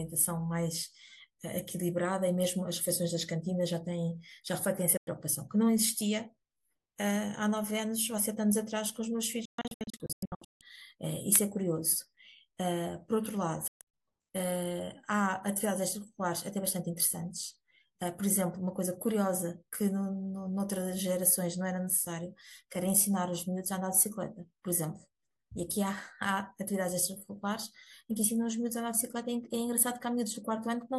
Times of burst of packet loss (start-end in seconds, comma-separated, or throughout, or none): none